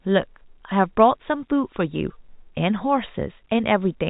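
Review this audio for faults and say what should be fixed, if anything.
Nothing needs fixing; no faults can be heard.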